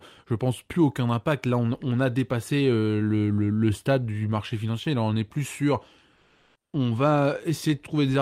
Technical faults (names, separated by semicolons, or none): comfort noise in place of the background